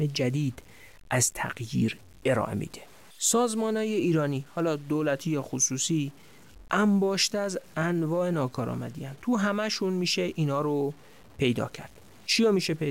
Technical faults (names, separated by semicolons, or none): low bit depth without dither